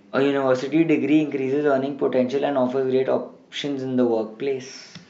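No technical faults are present in the signal at any point.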